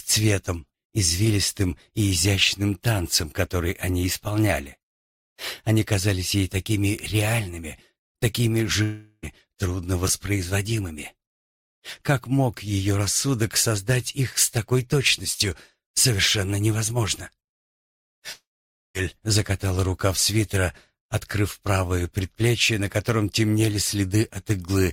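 A long network dropout at 8.83 to 9.25 s leaves a gap of about 0.4 s. The last sound is stretched into a fading buzz for almost the whole stretch, with only about 30 ms of true silence before the audio resumes further on and the missing portion never returns. This is likely caused by packets failing to arrive and the receiver concealing the loss.

At 10.07 to 10.09 s, chunks out of order produce a brief jumbled flick. A 10 ms chunk was written one chunk late, so it plays after the chunk that should follow it. No audio is lost, but the swap creates three hard joins within 20 ms.

A second long network dropout runs from 18.33 to 18.96 s and removes about 0.62 s. Here the concealment fades quickly, leaving about 0.52 s of silence before the audio picks up past the lost section.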